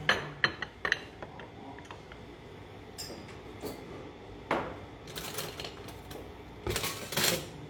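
No technical faults can be heard anywhere in this recording of sounds. There is nothing in the audio to point to as a problem.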